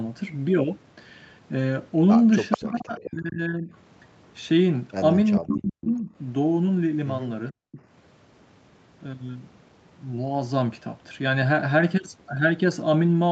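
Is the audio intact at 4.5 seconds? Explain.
Yes, the speech at 4.5 seconds is intact, with no dropout, glitch or distortion, only the normal call-path band limit that leaves nothing above about 8 kHz.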